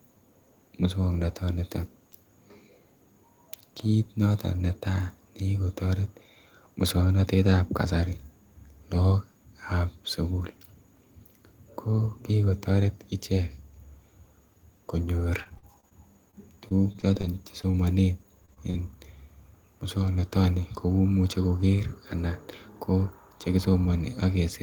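From 15.43 to 15.93 s and again from 16.31 to 17.75 s, repeated packet loss (robotic sound) chops the speech. Six and then eleven holes, the longest 49 ms, are patched by extending the last sound. The result is choppy and stuttering, with smeared, repeated harmonic bands on a spectrogram.

Short concealed packet loss follows at 18.45–18.50, 18.54–18.58 and 18.70–18.76 s. Each loses about 20 ms and is bridged by synthesized continuation, heard as brief smears or wobbles. On the waveform these show as smoothed patches, and the last one is accompanied by a slight timing shift.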